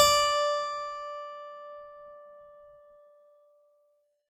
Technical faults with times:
none

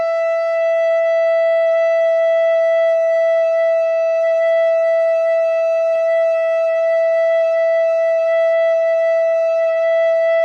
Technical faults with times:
5.96 dropped samples

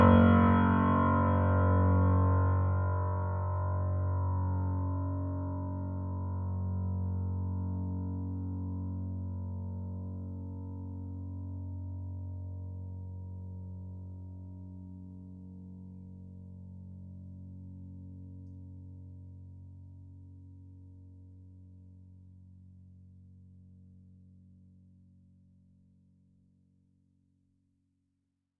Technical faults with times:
none

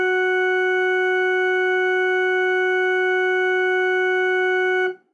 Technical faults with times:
none

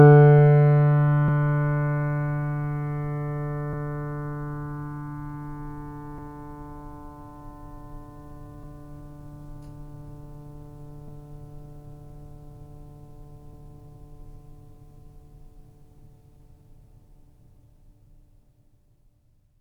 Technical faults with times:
1.28 audio missing between chunks
3.73 audio missing between chunks
6.18 audio missing between chunks
11.08 audio missing between chunks
13.53 audio missing between chunks
15.98 audio missing between chunks

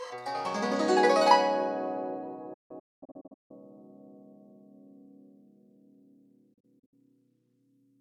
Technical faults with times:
2.53-3.51 digital broadcast dropout
6.53-6.93 digital broadcast dropout

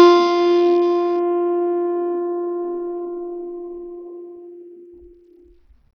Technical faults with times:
0.00-5.96 Bluetooth SBC compression

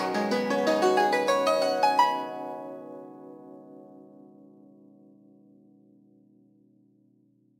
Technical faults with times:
0.00-7.59 sample clock jitter

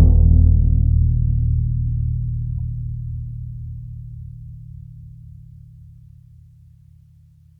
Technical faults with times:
2.58-2.60 corrupt frame decoded

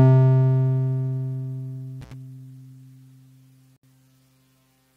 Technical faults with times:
2.01-2.13 intermittent contact
3.76-3.83 gap at a join of encoded pieces

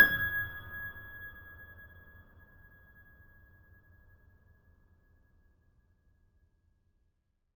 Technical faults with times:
0.00-7.55 imaging from sample-and-hold upsampling

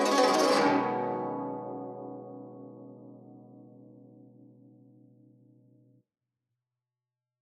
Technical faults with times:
none

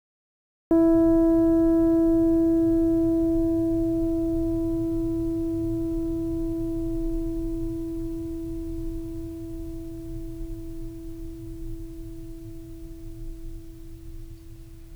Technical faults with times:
0.00-0.71 cut-off start

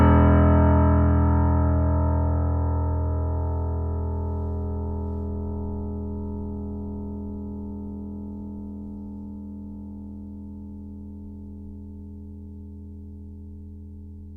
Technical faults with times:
none

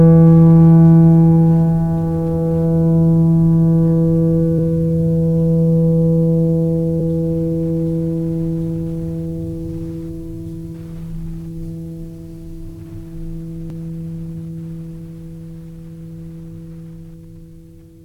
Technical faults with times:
4.58 damaged data in a compressed stream
6.99 damaged data in a compressed stream
13.70 damaged data in a compressed stream

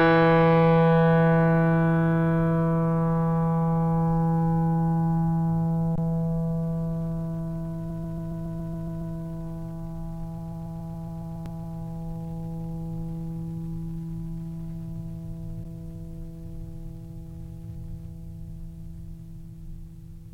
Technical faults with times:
5.96-5.98 underrun with held sample
7.89-9.14 repeated frames
10.37-11.77 repeated frames
11.45 underrun with held sample
15.64 underrun with held sample

